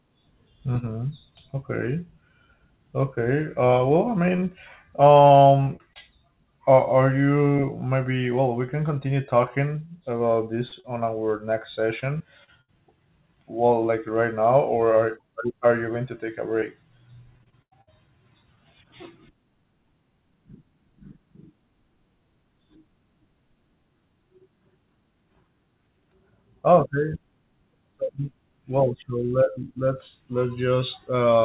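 Choppy stretches with pieces missing run from 4.36 to 5.98 s, from 12.0 to 12.7 s and from 16.6 to 18.59 s. This is repeated packet loss (robotic sound): holes of up to 32 ms, 66 ms and 92 ms respectively were patched by extending the preceding sound, over and over.

Two brief smears at 10.68 to 10.74 s and 10.80 to 10.86 s are short concealed packet loss. About 40 ms went missing each time, and the receiver bridged each hole by continuing the last sound before blending back into the real audio.

Throughout, nothing reaches above 4 kHz, which fits a narrowband call codec such as G.711.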